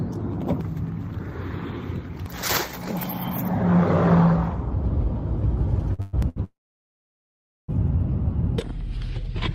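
At 5.93 s a short stall from a late packet begins and runs to 6.01 s. A packet missed its slot, so the receiver held the last sound for about 55 ms until it arrived. Nothing is lost. The sound just lingers briefly, with a slight buzz or dip. A second stall follows at 6.29 s, lasting to 6.38 s. Here the held sound stretches about 72 ms before playback resumes from the same point.

A call audio freeze joins straight onto the first stall, from 6.01 to 6.15 s. The sound is drawn out as a fading buzz or hiss for about 122 ms and never drops to silence. Then it picks up where it stopped. A much longer freeze runs from 6.44 to 7.70 s, about 1.2 s in all. The held sound dies away quickly, and roughly 1.16 s of that is silence. The audio then resumes with nothing missing, so the gap simply pushes everything later. Both freezes are likely caused by packets delayed in transit, which left the receiving buffer empty.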